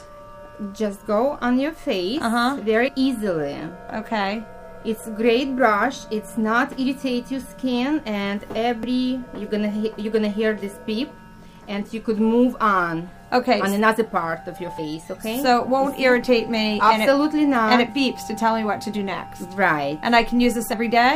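Audio missing between chunks at 2.88, 8.83, 14.78 and 20.73 s: the sound skips abruptly at each of these points, with about 50 ms cut out and the two sides butted together without any silence. The regular spacing, about every 6 seconds, suggests the likely cause is a recorder or processor handling the audio in 6-second chunks and dropping a short piece each time it closes one chunk and opens the next.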